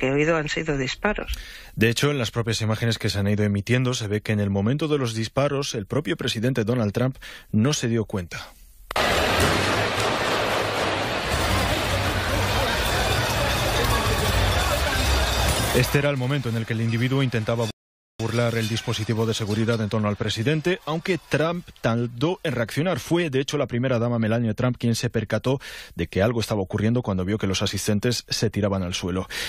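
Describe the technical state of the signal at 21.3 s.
At 21.3 s the signal is intact, with no audible fault at that moment.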